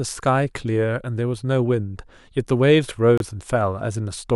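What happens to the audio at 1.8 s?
Nothing goes wrong at 1.8 s; the speech carries on intact through that moment, with no dropout, click or distortion.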